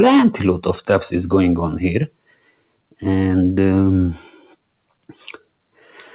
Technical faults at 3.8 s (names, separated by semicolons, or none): noise suppressor applied to music or sounds